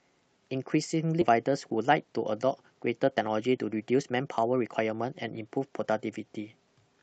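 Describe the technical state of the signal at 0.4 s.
At 0.4 s the signal is intact, with nothing beyond the ordinary coding character of the call path it travelled through.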